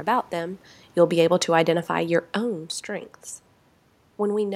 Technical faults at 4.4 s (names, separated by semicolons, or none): none